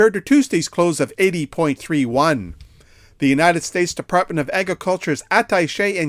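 No technical faults can be heard anywhere in this audio. Nothing in it calls for a timestamp or a note on its cause.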